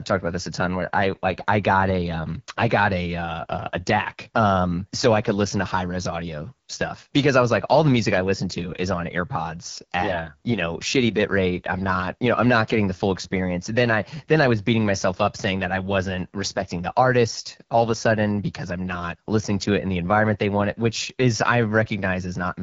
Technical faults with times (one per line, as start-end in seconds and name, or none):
0.00-22.63 AMR wideband (HD Voice) codec